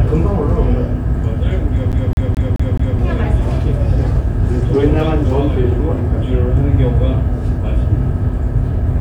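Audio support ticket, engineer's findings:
CD stuck on one turn, 1.92 to 2.99 s. Same 0.21 s fragment repeats five times, short mute at each jump. Scratch throwing the laser back one track every rotation.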